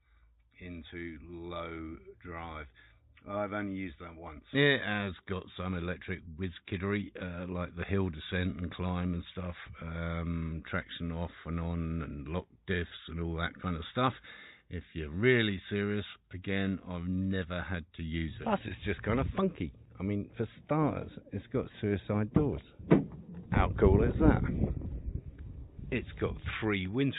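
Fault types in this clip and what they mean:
No technical faults can be heard anywhere in the signal; level, continuity and timing hold steady throughout.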